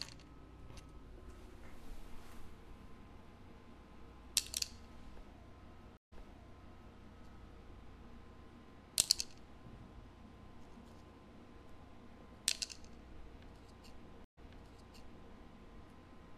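A recording of everyday sounds with two stream reconnects: the connection dropped and a fresh decoder restarted, leaving gaps of 148 ms at 5.97 s and 126 ms at 14.24 s. Each time, playback resumes about 0.86 s and 0.98 s earlier, repeating material just heard.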